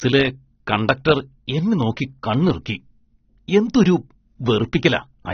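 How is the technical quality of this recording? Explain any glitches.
The quality is limited by a problem that runs through the whole recording: it sounds like low-bitrate audio saved at a high bitrate. Across the speech there's nothing at all above about 6.3 kHz, so it sounds dull and boxed-in. That pattern most likely comes from an early pass through a very lean codec, which fits something like 24 kbit/s AAC, followed by a re-save as a fat MP3. The second encode can't bring back the top end the first one threw away.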